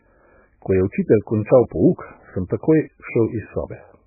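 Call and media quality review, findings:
Watery, swirling speech throughout, dull and muffled, with smeared consonant onsets; nothing above 2.5 kHz. Probable component: encoder, likely MP3 compression at a starved bitrate, consistent with around 8 kbps. Mechanism: encoder fixes a low treble cutoff, zeroes weak frequency lines that flicker frame to frame, and blurs attacks.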